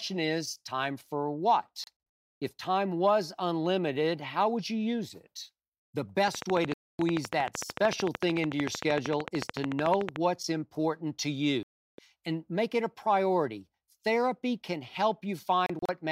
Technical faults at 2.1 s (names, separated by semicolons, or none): digital broadcast dropout